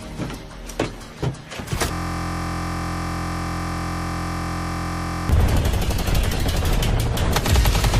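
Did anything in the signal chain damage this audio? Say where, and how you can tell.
Yes: a system hang loop at the driver or buffer stage replays one 23.22 ms slice, fitting a 1024-sample buffer, from 1.93 to 5.29 s, producing a steady 43.1 Hz buzz.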